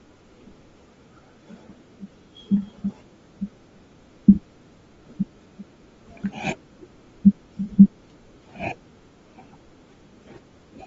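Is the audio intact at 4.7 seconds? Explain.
No, Bluetooth LC3 compression likely affects 4.7 s and the whole clip: upper frequencies are stripped and noise-filled, leaving speech plainly breathy and grainy, fitting roughly 32 kbps.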